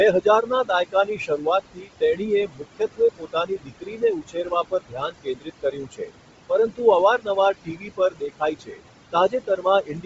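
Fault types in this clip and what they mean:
Noise suppressor artifacts: The room noise, which sits about 11 dB below the speech, pumps, dropping between phrases and returning under them. A suppressor is lowering bands it judges to be steady noise, frame by frame, by up to about 21 dB.
Bluetooth LC3 compression: Nothing is heard above 7.7 kHz, and the speech has a heavily grainy, breathy edge. The likely cause is LC3 coding at a low bitrate. The damage fits roughly 24 kbps with short 7.5 ms frames.
Speech cut by the noise suppressor: Soft consonants and word endings sound swallowed, across about three seconds of 0.21–6.12 s, with dips up to about 21 dB. This recurs more briefly at 7.18–8.81 s and from 9.12 s onward. The suppressor mistook quiet speech for background noise.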